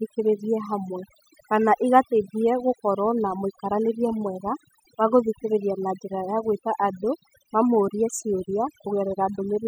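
A speech recording that was noisy to begin with has been run through noise reduction set far too strong, showing as overdone noise removal across the whole clip. Frequency bands near the noise estimate are pulled down or switched off, so pauses fall to near silence with twinkling specks.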